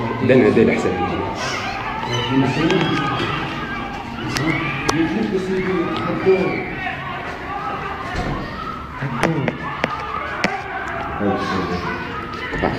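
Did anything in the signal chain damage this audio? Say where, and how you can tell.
No, nothing audible in the signal chain has damaged this audio; the signal stays continuous and intact at every stage, with no sign of harm at any point.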